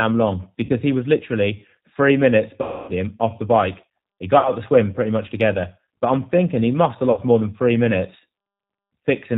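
The whole clip has the sound of the G.729 codec, and it's easy to hear. The speech is rebuilt from a vocal tract filter, a pitch predictor and a few pulses per frame, so it comes across rough and a bit synthetic, with nothing above 4 kHz. That thin, slightly synthetic character suggests a narrowband VoIP call at around 8 kbit/s.

On top of that there are four dropouts where VoIP packet loss was concealed by the speech codec. At 0.65 s there's a short one lasting about 40 ms. The big one starts at 2.62 s and covers roughly 260 ms, running to about 2.92 s. Two more at 4.39 s and 7.11 s each lose about 60 ms. In each gap the decoder keeps extrapolating from the last pitch and filter it had, so the speech smears into a buzzy tone or coloured noise that fades as the gain drops. Because each frame builds on the previous one, the speech stays weak or distorted for a moment after audio returns, rather than snapping straight back.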